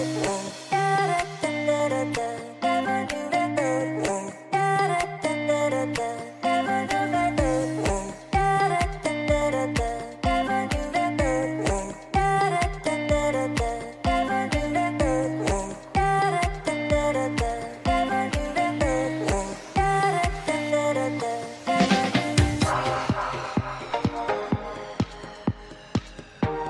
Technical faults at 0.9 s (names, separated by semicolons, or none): none